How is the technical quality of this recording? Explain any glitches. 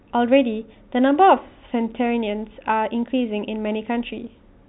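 No glitches turn up here, just ordinary telephone-band speech through G.711 telephone coding, with nothing above about 3.9 kHz, as you'd expect from a phone line.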